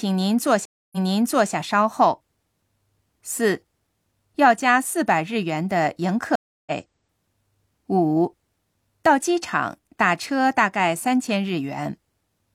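At 0.65 s the speech drops out for 268 ms, a stream reconnect, then resumes 604 ms earlier, so material repeats until 1.53 s. A second reconnect at 6.36 to 6.72 s leaves 310 ms of silence and resumes about 0.2 s later, skipping material. Each restart begins a fresh decoder that fades in.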